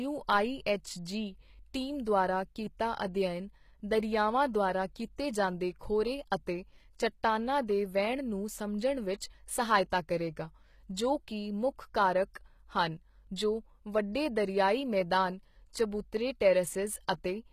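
A speech recording runs its full length with plainly audible damage: the upper register has a synthetic, gritty sheen, s sounds come out lispy and metallic, and nothing reaches above 14.9 kHz. This is likely HE-AAC compression, which fits a bitrate around 20 kbps. The codec stores only the lower spectrum and regenerates the treble by copying lower bands upward under a coarse envelope, so the rebuilt highs are misaligned with the true harmonics.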